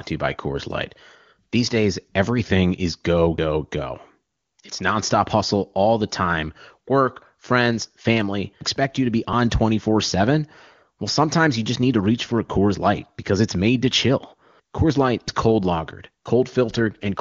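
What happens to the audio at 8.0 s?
Nothing goes wrong at 8.0 s: the speech continues intact through that moment, carried by the AMR wideband (HD Voice) codec at a rate high enough that it stays clear there.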